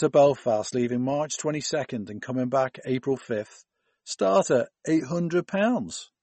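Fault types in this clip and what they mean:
MP3 compression: likely a starved MP3 encode, fitting roughly 32 kbps, that removes everything above 8.3 kHz and drops weak detail, leaving the speech dull and watery throughout.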